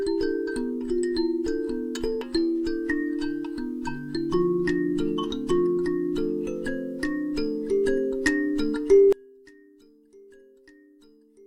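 One channel inverted from 9.13 s to the end: the audio drops by about 30 dB, likely because one channel's reversed polarity cancels everything both channels share when summed.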